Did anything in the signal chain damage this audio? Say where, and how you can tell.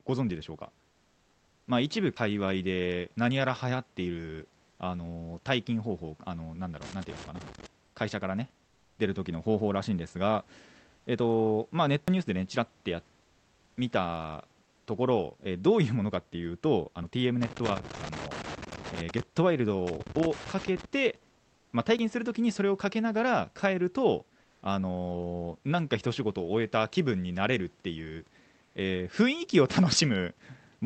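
Yes. At 2.17, 12.08 and 21.99 s the speech skips with no gap, each losing roughly 40 ms. This is audio missing between chunks, likely a buffer or driver stage dropping a piece at each chunk handover. The even spacing separates it from random network loss.

From 6.82 to 7.66, 17.43 to 19.23 and 19.87 to 20.85 s there are irregular bursts of scratching. This is loose connector crackle in the analogue wiring: a contact making and breaking. The uneven timing and chopped texture set it apart from regular digital dropouts.

Between phrases at 8.65 to 8.99, 10.99 to 11.07, 13.20 to 13.76, 14.64 to 14.86 and 24.41 to 24.61 s, the room background turns into a smooth, detail-free hiss, about 1 to 6 dB quieter. This is comfort noise in place of the background, likely from Opus DTX in call processing. The speech itself is left intact, which rules out a dropout.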